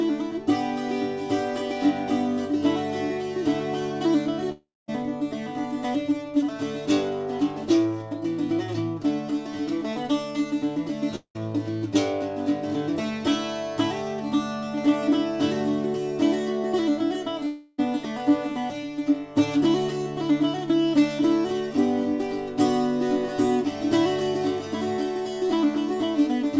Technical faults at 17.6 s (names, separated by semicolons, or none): long network dropout